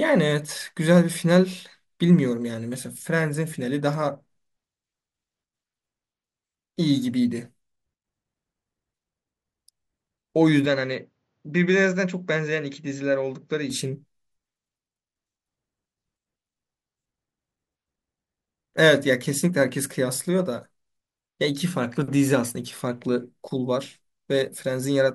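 A speech clip with one fault: from 10.66 s to 13.70 s the sound turns duller, with nothing above 7.6 kHz, a level drop of about 5 dB and a faint new noise floor. There is no gap at the switch. This is likely an input switched to a poorer device.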